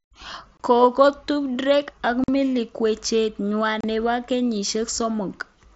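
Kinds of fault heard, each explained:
Unconcealed Bluetooth headset packet loss: the speech has three brief holes of about 22.5, 45 and 30 ms with abrupt edges. Short audio packets between headset and phone were lost, and silence or an idle pattern took their place because nothing patched over the gaps.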